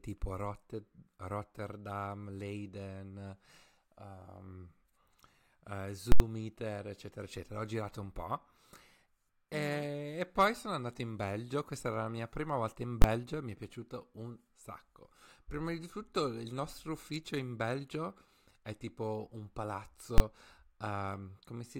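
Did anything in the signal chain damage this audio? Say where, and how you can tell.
Yes. Invalid numbers at full scale hit the speech at 6.12–6.20 s, 13.02–13.04 s and 20.18–20.20 s. A processing calculation produced infinite or invalid values that were pinned to full scale at sample-format conversion, giving a loud pop, then silence, then a pop across the 80 ms block, and single bangs for the 20 ms blocks.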